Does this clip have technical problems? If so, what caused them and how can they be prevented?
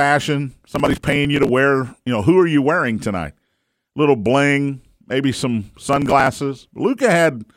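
Yes. Processor overload crackle appears from 0.76 to 1.49 s and again from 5.89 to 6.27 s. The processor missed many small buffers, around 3 ms each, again and again. Each missed buffer was skipped, leaving hard-edged gaps that merge into gritty crackle. Keeping CPU load low during recording, or using a larger buffer, prevents it.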